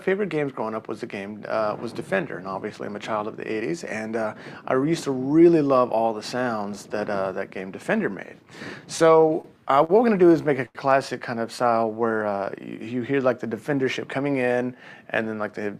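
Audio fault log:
8.97–9.46 s, repeated stalls (stutter): four short gaps, longest 29 ms, about 61 ms filled by continuing the last sound as the jitter buffer kept emptying; nothing lost, but the audio drags and stutters.
9.84 s and 10.66 s, short stall from a late packet: the receiver stretched the last sound 50 ms, then 90 ms, awaiting the late packet, so a sound is held too long with a slight dip.
13.74–14.26 s, jitter buffer speed-up: roughly 70 ms of pitch periods removed to drain excess buffered audio, so the sound runs about 10% fast at unchanged pitch and feels hurried.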